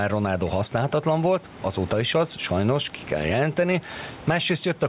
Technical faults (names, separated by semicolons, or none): gain pumping